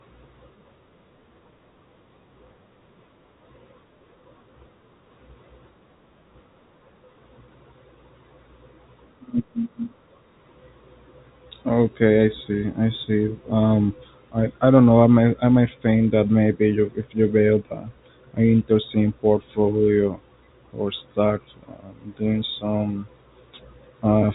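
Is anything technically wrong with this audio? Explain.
No, nothing is technically wrong: this is speech carried over an ordinary telephone channel, whose band stops at about 3.8 kHz as fixed-line G.711 telephone coding does, with at most a faint trace of that coding's quantisation noise following the level of the voice.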